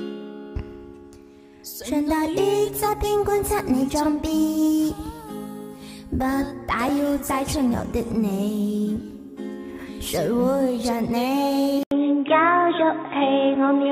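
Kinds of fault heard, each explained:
Input switched to a poorer device: at 11.83 s an 80 ms gap is followed by duller, boxier sound with nothing above 3.8 kHz, a faint new noise floor and much the same level, likely the input moving to a narrower-band microphone or headset profile.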